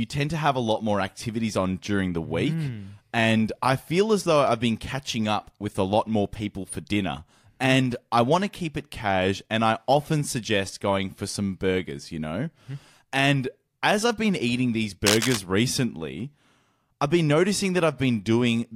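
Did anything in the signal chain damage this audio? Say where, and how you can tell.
Yes, in the analogue wiring. From 15.07 to 15.37 s, a burst of cable scratch noise sits over the speech, a harsh rustling scratch roughly as loud as the speech itself. The likely cause is a worn cable or connector being moved, its contact resistance jumping around and injecting irregular noise. On a spectrogram this shows as a broadband, patchy smear spanning the whole frequency range for about 0.3 s. The waveform shows dense, uneven spikes riding on the speech.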